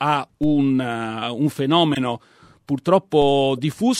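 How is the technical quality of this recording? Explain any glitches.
The recording has two kinds of glitch: two DC steps and two corrupt decoded frames.

At 0.43 s and again at 3.22 s, a DC step shifts the waveform's zero line suddenly. A 2 Hz high-pass then pulls it slowly back. Each is heard as a low thump. On the waveform the trace jumps and then drifts back to centre, and on a spectrogram it shows as a thin broadband line with a low-frequency smear.

At 1.92–1.97 s and 3.57–3.59 s, a corrupt frame was decoded. Flipped bits in the compressed data made the decoder place energy at wrong frequencies. The first hit spans about three frames and is a fairly loud chirp. The second, about two frames, is a much quieter blip. Each appears as an out-of-place patch or streak on the spectrogram.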